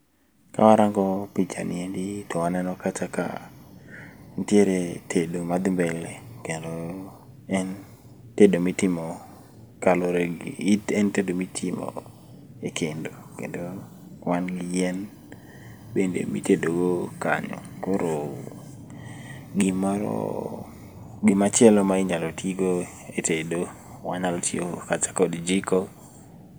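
No faults found anywhere in this speech recording.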